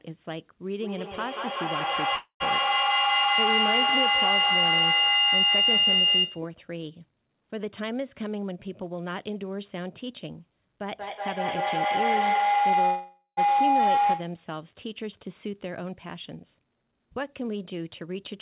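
Speech carried over a call, band-limited with nothing above 4 kHz, which fits a 64 kbps G.711 A-law path. A feedback howl runs from 0.8 to 6.56 s. It centres around 3 kHz, pulses roughly every 200 ms, and peaks about 9 dB above the speech. A second feedback howl runs from 10.81 to 14.47 s, this time around 700 Hz, with the same pulsing and level. Both come from an acoustic loop: a microphone and loudspeaker in one room on the same call. Each trip round the loop adds gain, so the repeats grow and settle on the pitch the loop favours. The pulsing tracks the loop delay. Two call audio freezes occur, at 2.16 to 2.43 s and 12.85 to 13.40 s. In each, the last sound carries on as a fading buzz or hiss, then drops to silence for about 100 ms and 90 ms. The inserted gaps are 240 ms and 517 ms. Nothing is lost, and the speech resumes where it stopped. The likely cause is delayed packets draining the jitter buffer. 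Jitter buffer speed-up follows at 8.28 to 10.27 s, running at 109% speed, and at 16.05 to 18.33 s, at 108%. Pitch stays the same, but the speech sounds hurried. The receiver trimmed short pitch-period pieces, roughly 200 ms in each stretch, to shrink a backlog.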